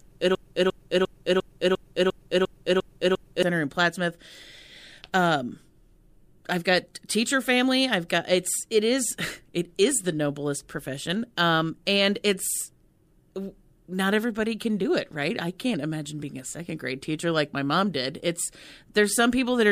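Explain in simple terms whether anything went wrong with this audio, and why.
From the start to 3.43 s, a broken-record loop repeats one 0.35-second fragment nine times, likely because playback stalled; the audio meant for that stretch is lost.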